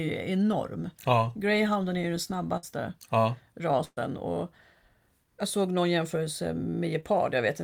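At 2.57 to 2.65 s and again at 3.85 to 3.99 s, the speech smears into a held, fading tail before jumping ahead. This is burst of packet loss. The receiver stretched the last sound over gaps of about 52 ms and 120 ms, and the second includes 20 ms of silence.

At 7.01 to 7.04 s there is a brief smear or wobble. This is a short concealed packet loss. About 20 ms never arrived in time, so the decoder continued the preceding sound before blending back.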